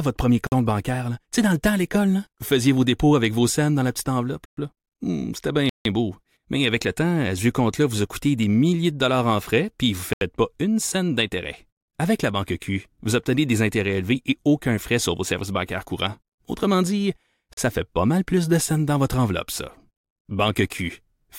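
Blocks of digital silence cut into the speech at 0.47 s (53 ms), 4.45 s after "scènes dans la petite" (120 ms), 5.69 s (160 ms), 10.13 s between "frais puis vous ne" and "pas une scène d'intérêt" (80 ms), and 17.53 s before "ça fait pas mal" (40 ms). The sound drops to silence, which points to the output buffer not being filled in time. Unlike a faded dropout or a natural pause, each hole starts and ends abruptly.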